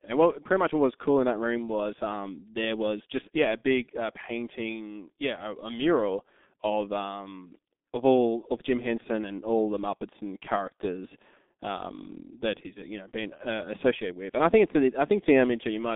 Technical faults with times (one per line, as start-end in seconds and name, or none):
0.00-15.95 G.723.1 codec